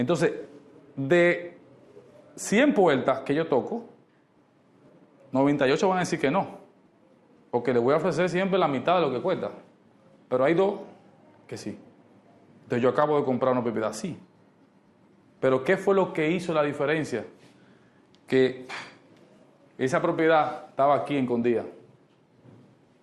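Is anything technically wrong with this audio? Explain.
No, nothing technically wrong can be heard here.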